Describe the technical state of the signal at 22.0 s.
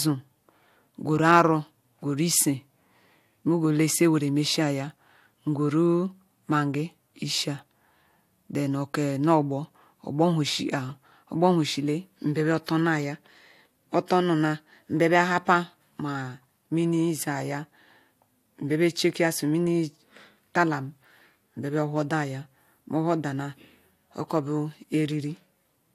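At 22.0 s the speech signal is intact, with no dropout, clipping, glitch or other technical fault audible at that moment.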